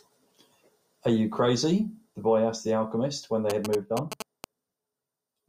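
From 3.50 to 4.45 s, rectified GSM signalling bursts from a nearby phone gallop as dit-dit-dit short 217 Hz buzzes, forming regular vertical spectrogram stripes.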